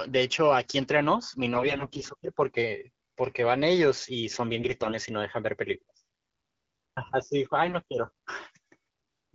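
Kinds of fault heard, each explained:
AMR bit errors: From 1.53 to 2.03 s, 4.53 to 4.95 s and 7.66 to 7.75 s the speech turns hoarse, scratchy and gargly while keeping roughly its pitch and loudness. Bits in the weakly protected parts of the coded frames arrived flipped but still passed the check on the key bits. So the excitation pulses land in the wrong places and the fine pitch, gain and spectral values drift. The first burst has an error rate of about 15 percent, the highest of the three.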